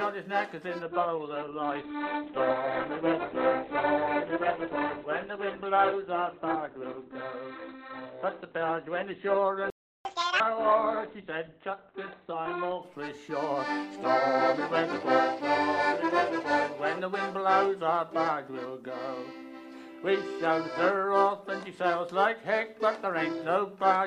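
At 0.82 s the adaptive stream switches to a lower bitrate without any gap, as if the connection slowed. Until 12.82 s codec artefacts rise. This points to Opus dropping from 64 kbit/s to around 12 kbit/s.

Inside that stretch, at 9.70 s, a playback stall cuts the sound off mid-flow for about 350 ms, until 10.05 s. The waveform shows a flat line and the spectrogram a blank vertical band. The likely cause is the player running out of buffered data.

From 10.05 to 10.40 s the player catches up at higher speed, playing its backlog at double speed. Pitch jumps up by roughly ten semitones, then snaps back. On a spectrogram the harmonics shift upward and are compressed in time for that short span.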